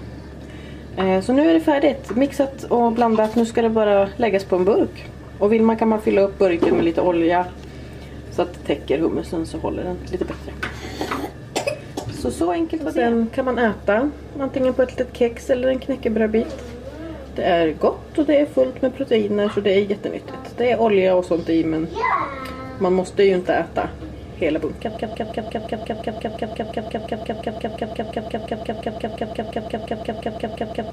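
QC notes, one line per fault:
24.97 s to the end, broken-record loop: a fragment of about 175 ms repeats exactly and back to back, around 34 times, giving a rapid stuttering pulse at roughly six repeats per second that never resolves. Whatever should have followed is missing, replaced by the same sliver over and over. The likely cause is that the player, encoder or stream stalled and kept re-sending the last piece it held until the audio stopped.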